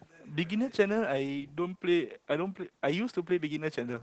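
Opus voice compression runs throughout: SILK at a low bitrate, consistent with 12 kbps, caps the band at 8 kHz and coarsely codes the excitation, leaving the speech muffled, hoarse and slightly robotic.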